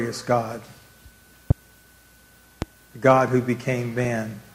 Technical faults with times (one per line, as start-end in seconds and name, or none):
1.50-1.53 loud pop
2.62-2.65 loud pop